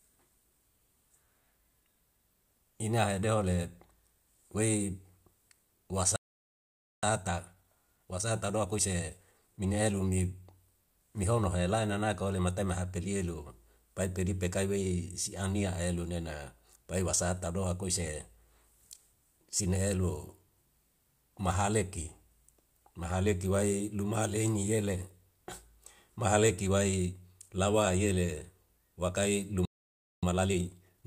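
At 6.16 s the speech cuts out mid-flow for 0.87 s, until 7.03 s. This is a playback stall. The player likely ran short of data or was blocked. From 7.03 to 10.03 s comes time-compressed catch-up. Small pieces are cut out and cross-faded, so the speech runs at 1.15 times speed. The pitch stays normal. A second stall silences the speech from 29.65 to 30.23 s, for 0.57 s. Catch-up then runs to the end at 1.25 times, more hurried than before.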